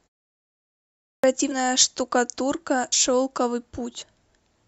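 After the pause that opens the clip, the sound at 0.91 s kicks in abruptly, missing about 0.33 s of its start. That's a clipped start after a pause: the output device dozed off during the silence and took a moment to wake. Then there are compressed frames skipped at 1.5 s, 2.92 s and 4.01 s. Each time the audio jumps ahead by roughly 50 ms, 100 ms and 50 ms. Those jumps fit whole 26.1 ms frames going missing or being rejected by the decoder.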